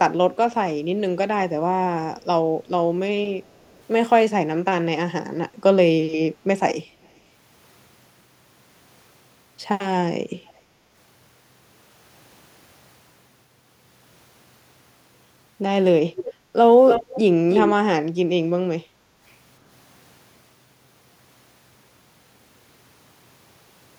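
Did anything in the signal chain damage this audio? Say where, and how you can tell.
Yes. There's echo leak in call processing: delayed copies, 300 to 400 ms late, at 3.43, 7.02, 10.47, 16.16, 16.86 and 17.49 s, faint early, reaching speech level by the end. It's likely far-end loudspeaker pickup slipping past the canceller.

There's also background gated by the echo canceller, at the same stage. Room tone drops about 9 dB at 16.34 s and 18.83 s, for roughly 0.2 and 0.4 s, while the canceller ducks the mic.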